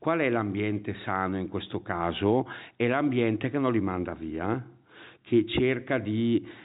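No technical faults can be heard anywhere in the speech. The G.711 telephone coding is working as intended, with the band ending at 4 kHz and at most a faint quantisation hiss that follows the level of the voice.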